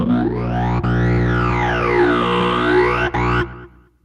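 No technical faults are audible.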